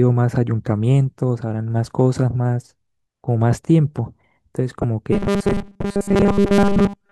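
A corrupt frame decoded at 4.82 to 4.84 s: a couple of damaged compressed frames were played anyway, throwing loud misplaced energy into the speech.

Robotic sound from repeated short buffers runs from 5.13 s to the end. The speech becomes a rigid metallic buzz at 200 Hz, likely from repeating 5 ms chunks that replace most of the real audio.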